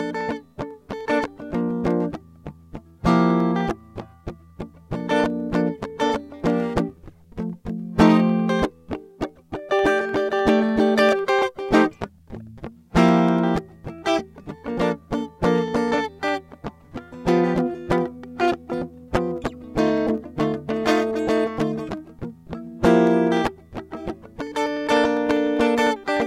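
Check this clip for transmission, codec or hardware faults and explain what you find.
The music carries periodic USB or driver dropouts from 0.11 s to 26.17 s. Every 0.1 s a very brief slice, well under a millisecond, is skipped as the bus or driver stalls, giving hundreds of evenly spaced ticks heard only under signal. A waveform shows small regular discontinuities, and a spectrogram shows thin vertical broadband lines spaced 0.1 s apart.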